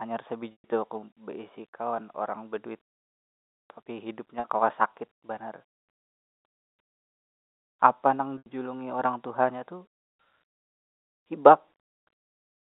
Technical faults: packet loss with pitch repetition

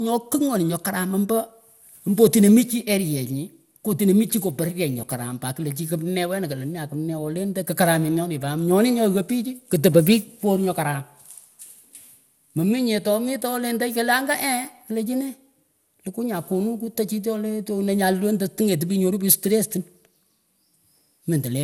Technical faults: generation loss

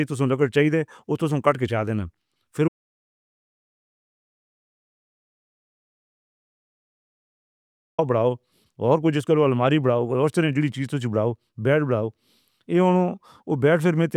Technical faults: audio dropout to silence

